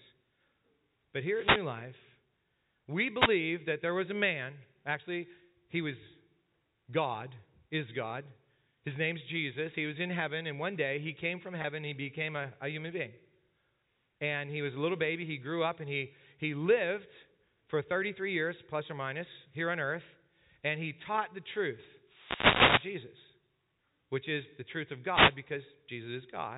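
Between 1.25 and 1.72 s, the analogue FM link of a wireless microphone fades as reflected radio paths cancel, and receiver noise rises. This wireless microphone noise hit comes through as a swish of static over the speech. A shorter hit follows from 3.16 to 3.31 s, ending just before "that there was a", and it is a brief burst of the same hiss.

At 11.62 to 11.64 s, about 20 ms of audio goes missing, which fits a single lost packet. The receiver bridges the gap by repeating the last pitch period. This packet loss with pitch repetition is heard as a slightly held, buzzy instant before the speech resumes.

Two more fades follow. From 22.03 to 23.10 s, right after "he taught the truth", a longer hit lays a sustained rush of static across the sound. From 25.07 to 25.39 s, after "is the truth of", a shorter burst recurs. All of this is heard through G.711 telephone coding, which cuts everything above 4 kHz.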